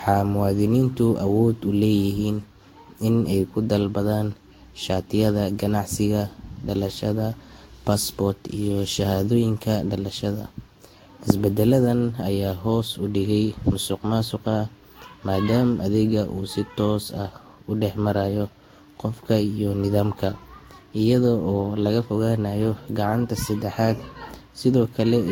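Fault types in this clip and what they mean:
Generation loss: the speech has likely been through a lossy codec several times over, roughly five passes, with each decode and re-encode quantising the signal again on a shifted frame grid so the errors stack up. The result is a swirly, hollow smear across the whole clip, with consonant attacks softened and blurred, more damage than a single encode near 60 kbit/s would leave, and nothing audible above 16.7 kHz.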